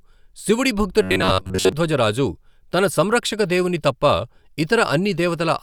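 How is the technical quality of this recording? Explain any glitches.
The recording has one glitch: a stretch of robotic sound from repeated short buffers between 1.02 and 1.72 s, ending just before "రాజు తన సంరక్షక దేవుని". There the speech becomes a rigid, metallic buzz pitched at 93.8 Hz that only loosely tracks the words. The likely cause is audio arriving too late, so the player loops a fragment of about 10.7 ms in place of the missing signal, replacing most of that passage. On a spectrogram this shows as flat, evenly spaced horizontal harmonics at multiples of about 94 Hz. The waveform shows the same short cycle copied over and over.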